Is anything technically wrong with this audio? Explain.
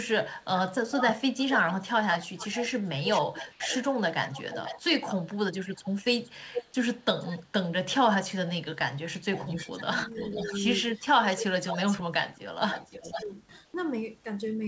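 Yes. Audio from the far-end loudspeaker leaks back as echo three times: 0.38 to 7.48 s, 8.75 to 10.61 s, and 11.24 to 13.26 s. The likely cause is an echo canceller that failed to remove it. The delayed copy trails the speech by 454, 489 and 504 ms, at roughly 10 dB below it, and is heard as a faint repeat behind the talker.

Speech is suppressed in double talk at 5.3 to 5.86 s, 9.83 to 9.91 s, and 13.02 to 13.31 s. When both sides were active, the canceller likely turned down the near talker along with the echo. The first two dips go down by around 20 dB, and the last by only a few dB.

Comfort noise replaces the background for 80 ms at 3.52 s and again at 13.66 s. During a pause in transmission, the receiver likely filled the gap with synthetic noise, which fits RFC 3389 comfort noise. The real background turns into a smooth, featureless hiss, about 3 dB quieter at the first point and at the same level at the second. 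The call's G.722 path also leaves nothing above 8 kHz.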